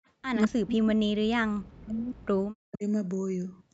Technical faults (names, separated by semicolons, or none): echo leak; speech suppressed in double talk